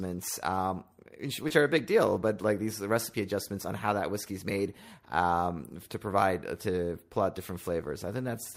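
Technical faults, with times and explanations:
1.48 to 1.52 s, short concealed packet loss: about 20 ms of audio arrived too late. The receiver extended the preceding sound, leaving a brief smear just before "are a big deal".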